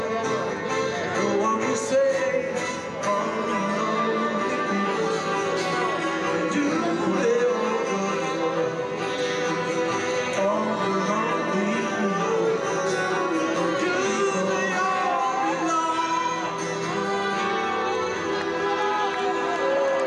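No technical faults can be heard anywhere in this clip.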